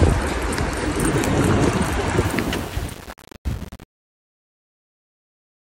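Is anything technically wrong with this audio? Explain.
Yes, there's truncation distortion on the fade-out, from 2.25 s to the end at 5.61 s. The gain stage keeps too few bits and adds no dither, which fits about 8-bit resolution. As the level drops, the waveform collapses into coarse steps, so the tail turns gritty.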